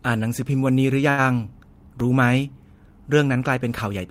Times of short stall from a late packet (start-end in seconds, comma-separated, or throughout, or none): 1.09-1.23